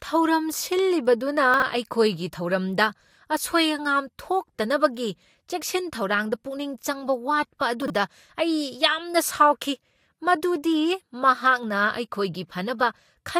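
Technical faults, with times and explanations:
1.54 to 1.62 s and 7.82 to 7.90 s, chunks out of order: each span briefly sounds jumbled, where the flow of speech scrambles for a moment. In both places a 20 ms piece of audio turns up three pieces late and plays after the three 20 ms pieces that should follow it. Nothing goes missing, but the order is wrong, and there are three abrupt joins.
7.58 to 7.61 s, pre-echo: a short hiss swells up just ahead of a sharp attack, and the attack itself sounds softened and smeared. The codec spreads its quantisation noise across a whole block. The attack falls late in that block, so noise sized for the loud onset also fills the quiet moment before it, leaking roughly 36 ms ahead of where the sound actually begins.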